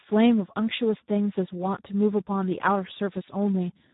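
A speech recording carrying heavy Speex codec damage from start to finish. The voice sounds hoarse and grainy, because the CELP coder has too few bits to model the excitation and substitutes a coarse approximation. The damage level fits a low setting around 8 kbps. There is no content above about 3.8 kHz, so sibilants and consonant detail are dull and muffled.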